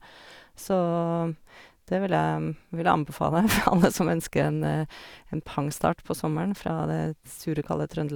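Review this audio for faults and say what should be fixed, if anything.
Nothing to fix: no dropouts, clicks, distortion or timing errors anywhere in the speech.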